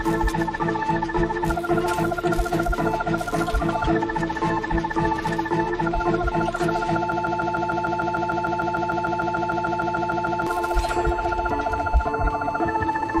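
The playback chain likely stalled at 7.12 s and kept resending its last buffered fragment, a broken-record loop: a 150 ms piece repeats exactly, back to back, 22 times until 10.47 s, a rapid stutter that replaces whatever audio belonged there.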